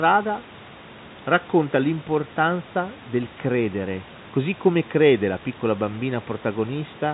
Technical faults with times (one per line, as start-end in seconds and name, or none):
none